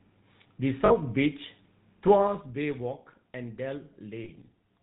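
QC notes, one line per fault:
Throughout, GSM full-rate codec: the speech has that buzzy, gravelly grit, and it's plainly audible. The codec models the vocal tract and drives it with a regular pulse excitation, keeping only every third excitation sample, so fine detail gets replaced by a coarse, rasping texture. Nothing above 4 kHz survives, which makes it sound narrow and boxy. The overall character fits the 13 kbps full-rate GSM flavour.
0.86 to 0.92 s and 4.24 to 4.31 s, lost GSM frames: two short spots, each about 40 ms long, where the audio briefly turns into a rough, metallic ring instead of moving on naturally. This happens because the decoder covers the gap by reusing the settings of the last good frame at a falling level. Each gap fits two dropped 20 ms frames, which is too short to fade to silence, so you hear only the brief ringing smear.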